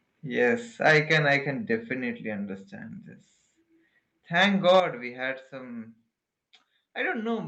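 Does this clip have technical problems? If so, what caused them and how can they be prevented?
Yes. The speech has two kinds of fault.

Microphone overload appears from 0.85 to 1.36 s and again from 4.41 to 4.80 s. The loudest syllables gain a harsh, crackly edge. Their peaks are flattened, about 8 dB over the limit in the first stretch and about 4 dB in the second. Around 2 percent of samples are cut flat. The likely cause is an input volume set so high that peaks hit the converter's ceiling. To prevent it, lower the microphone's input gain until the loudest speech peaks sit well below full scale.

A microphone volume step-down comes with each overload. At 0.91 s the level drops by about 2 dB. At 4.80 s it drops by about 8 dB. Speech and background fall together, all at once, with no gradual fade. This likely comes from the call software detecting the clipping and cutting the device's input volume in a single jump. 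To prevent it, set a safe input level beforehand so the software never needs to intervene.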